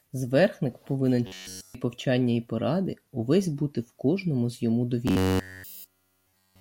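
Robotic sound from repeated short buffers appears at 1.27 to 1.75 s, just before "повчання і поради увесь", and again from 5.08 s, after "в кожному з йому", to the end. The speech becomes a rigid metallic buzz at 93.8 Hz, likely from a roughly 10.7 ms buffer looping throughout.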